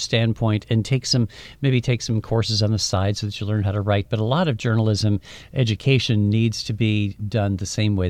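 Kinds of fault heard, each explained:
No technical faults can be heard in this speech recording. Nothing in the audio points to a problem in the chain that carried it.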